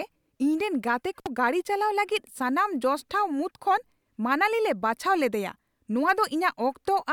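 Speech with an intermittent contact fault at 1.19 to 1.27 s. A loose connection opens for about 59 ms. The sound drops out, with crackle at each edge.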